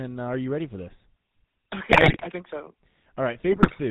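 From start to finish the speech has a buzzy, gravelly roughness with nothing above 4 kHz, the sound of the GSM full-rate codec, which fits 13 kbps. From 1.90 to 2.27 s and again from 3.52 to 3.80 s the speech breaks into squawks, pops and gargling. These are GSM bit errors: corrupted filter, pitch and gain values distort frames, more densely in the first burst.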